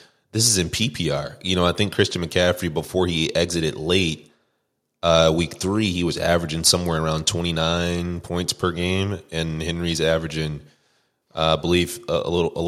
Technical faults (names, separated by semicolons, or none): none